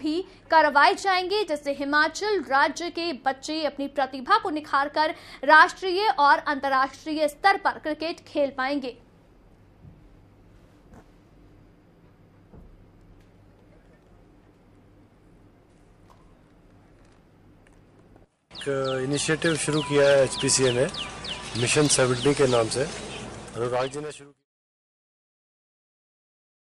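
Nothing technically wrong turns up here; the audio just eases down in a smooth editor-style fade-out from around 23 s, ending at 24.46 s.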